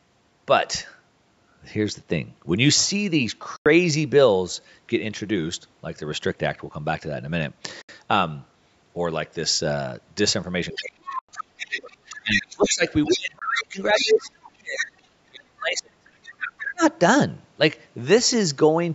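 Bluetooth dropouts occur at 3.56 to 3.66 s, 7.82 to 7.89 s, 11.19 to 11.29 s and 13.39 to 13.42 s. The sound goes abruptly silent for about 93, 70, 93 and 23 ms, then resumes further along, as if it kept playing. The likely cause is audio packets arriving too late at the headphones and being discarded. The lengths fit losses of four, three, four and one packet.

Speech suppressed in double talk runs from 10.73 to 16.05 s and again from 16.59 to 16.83 s. Across roughly 4 s of the first span the voice dips, thins and cuts out in pieces, at worst by about 30 dB. The likely cause is the echo canceller turning everything down because it cannot separate the talker from loudspeaker echo.

The other side's voice leaking through appears at 10.74 to 12.7 s, 13.05 to 13.6 s, 13.97 to 14.1 s, 14.77 to 14.86 s and 16.23 to 16.6 s. It is a second voice about 10 dB below the main speech, and about 5 dB below at 13.97 s. 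The likely cause is the far end's loudspeaker playback reaching the microphone and not being fully cancelled.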